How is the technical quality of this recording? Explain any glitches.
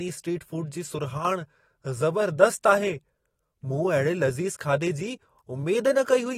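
The recording has one brief glitch. A channel drops out from 1.18 to 1.25 s: the speech abruptly falls about 6 dB for 70 ms, likely because one stereo channel was lost before the mono mix.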